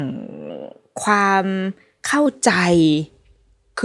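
A wrong sample rate fault runs from 0.50 to 2.26 s. The samples are played faster than they were captured, so speed and pitch rise together. The speech sounds about 1.09 times faster and 1.47 semitones higher, which fits 22 kHz audio played back at 24 kHz.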